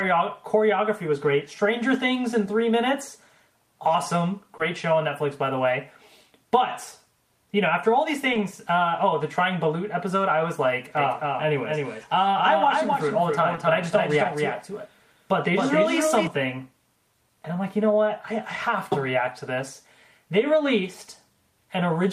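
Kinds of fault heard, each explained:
Short concealed packet loss: at 4.57, 8.33 and 13.55 s, 20 ms went missing and was patched by extending the preceding sound, leaving a brief smear.
Doubled audio track: from 10.97 to 16.27 s, a dry copy trails about 300 ms behind at about 5 dB quieter, likely from a slower second capture path.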